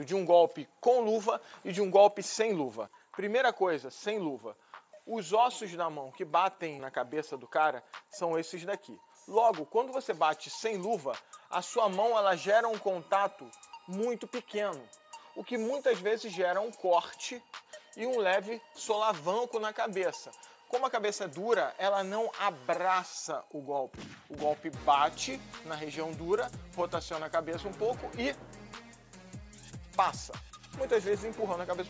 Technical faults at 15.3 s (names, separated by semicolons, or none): none